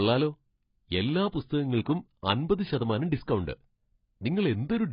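Right through the clip, the speech sounds dull and smeared, with nothing above 5.2 kHz and a fizzy, warbly edge. That's likely heavy AAC compression: short on bits, the encoder drops the top band and coarsely quantises the rest, which fits AAC-LC around 16 kbps.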